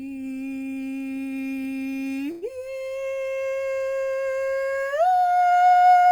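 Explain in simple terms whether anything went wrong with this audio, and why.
At 2.31 s the music briefly stalls: for about a tenth of a second, until 2.45 s, the last sound is stretched into a short fading buzz, then the music picks up exactly where it left off. This is a call audio freeze. The likely cause is network packets arriving late, so the receiver ran out of audio and filled the gap. Nothing was lost; the rest of the music simply plays about 106 ms later than it otherwise would.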